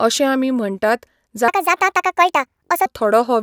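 From 1.48 to 2.86 s, after "अशें आमी म्हणटात", a wrong sample rate makes the speech run 1.5 times fast and about 7 semitones high, which fits 32 kHz audio played at 48 kHz. A spectrogram shows harmonics shifted 1.5 times higher and syllables squeezed in time.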